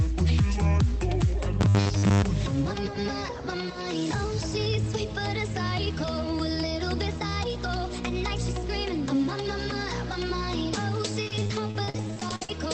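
Between 1.61 and 2.24 s, new audio was likely arriving too seldom, so the last 10 ms or so was replayed over most of that stretch. The result is robotic sound from repeated short buffers: a rigid, metallic buzz at 100 Hz laid over the audio. From 11.22 to 12.49 s, repeated packet loss leaves many short holes, the longest about 55 ms, each patched by stretching the previous sound. Roughly a third of that span, about 450 ms, is concealed, so the audio turns choppy and robotic with pieces missing. The call path itself caps the audio band at about 8 kHz.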